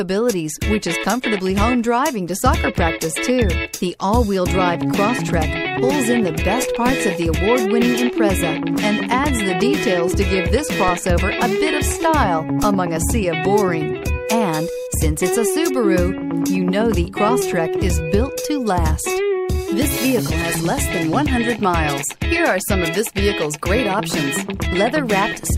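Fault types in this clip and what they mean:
DC step: the waveform's zero line suddenly jumps, here by about -12 dBFS at 1.62 s and 6.89 s and about -11 dBFS at 10.88 s and 12.63 s. Each offset then decays back to zero through a 20 Hz high-pass, so every jump is heard as a brief low thump under unchanged sound. A waveform shows the trace lurching off centre and sagging back; a spectrogram shows a short broadband vertical stripe concentrated at the lowest frequencies.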